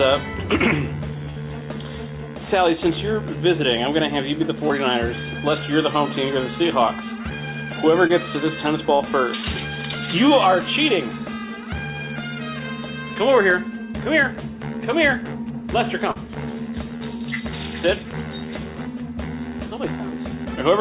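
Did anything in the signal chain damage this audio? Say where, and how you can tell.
Yes. The damage is in the network stage. The audio is band-limited to nothing above 4 kHz, which fits a narrowband G.711 call codec, and on top of that packets were lost in transit.

At 1.30–1.38 s and again at 8.95–9.02 s the sound freezes into a held, fading continuation of whatever preceded it, then jumps ahead with material missing. This is a burst of packet loss. Consecutive packets failed to arrive, so the receiver extended the last sound and attenuated it, about 60 ms of fill at the first point and about 45 ms at the second, before resuming past the lost stretch.

Shorter glitches sound like brief smears or wobbles, where a quick sound may drop out. They occur at 4.68–4.71 s, 8.07–8.11 s, 16.12–16.17 s and 16.97–17.02 s. These are short concealed packet loss. Only around 20 to 40 ms of audio went missing each time. 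The decoder patched each hole by continuing the preceding sound, pitched or noise-like, for roughly 12 to 36 ms and then cross-faded back into the real signal, which leaves that brief blurred texture.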